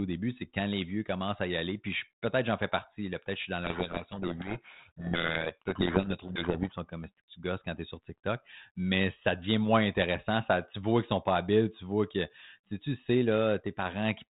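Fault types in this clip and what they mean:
Codec payload misread, 3.64 to 6.79 s, just after "je suis dans": the speech is buried in harsh distortion, which points to the two ends packing the 32 kbit/s G.726 code words in opposite bit order, so the decoder reads misplaced values until the formats match again.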